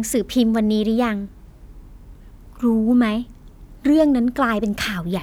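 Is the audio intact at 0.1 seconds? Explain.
Yes, at 0.1 seconds the audio is intact, with no fault present at that moment.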